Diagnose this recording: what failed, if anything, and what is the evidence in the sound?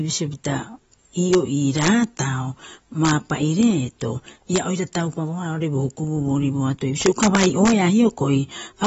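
Integer overflow at the sample-format or gain stage: loud peaks wrap to opposite sign, giving harsh cracks at 1.33, 1.79–1.88, 3.05–3.11, 3.63, 4.56–4.58, 4.95, 7.02–7.72 and 8.85–8.87 s.

The speech is dull and warbly throughout, with nothing above 7.7 kHz. That's likely AAC compression at the codec stage, fitting roughly 24 kbps AAC-LC.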